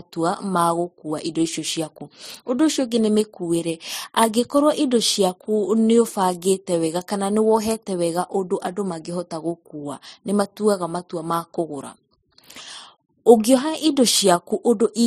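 Throughout the speech, the spectrogram shows a hard ceiling at 15.2 kHz, with swirly, watery smearing layered over grainy MP3 artefacts. This is likely transcoding between lossy codecs: a Vorbis-like pass followed by MP3, both at low bitrates of roughly 40–50 kbit/s.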